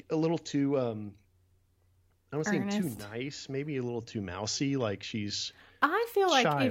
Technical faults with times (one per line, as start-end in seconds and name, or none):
none